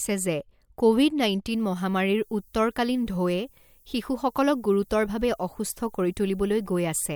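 From about 1.51 s right through to the end, a thin, steady hiss appears that leans hard toward the top of the band. That's low bit depth with noise shaping. The audio has been reduced to very few bits, which sounds like roughly 10-bit, and the rounding error has been shoved up into the highs rather than left flat. The noise sits around 35 dB under the speech.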